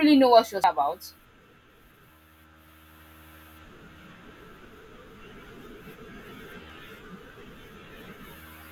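Short glitches cut through the speech at 0.64 s, just after "know what she", and again at 4.65 s and 6.70 s. Each is the sound of damaged data in a compressed stream: part of the encoded file is wrong, so the decoder misreads the affected frame, loses its place in the bitstream and hunts for the next valid frame header, producing a brief glitch before normal decoding resumes.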